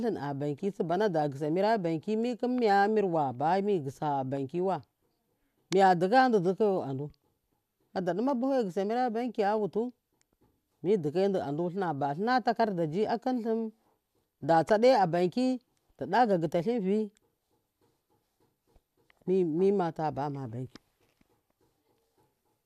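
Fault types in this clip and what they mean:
No technical faults can be heard in this speech recording. Nothing in the audio calls for a fault entry here.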